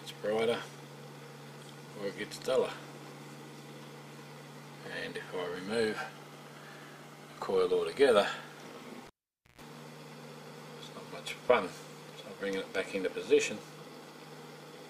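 A pop at 9.07 s gives way to near silence, then a 135 ms burst of 60 Hz mains buzz and a second pop at 9.61 s: a live cable pulled and plugged in again.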